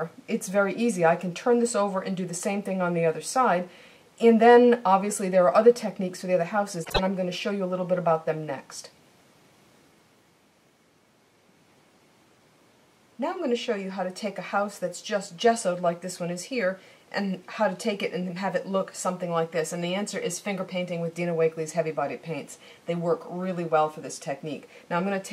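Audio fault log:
6.84–6.99 s, frames out of order: two adjacent runs of about 52 ms, each fitting two codec frames, were decoded in swapped order. The sound flutters briefly. No time is lost.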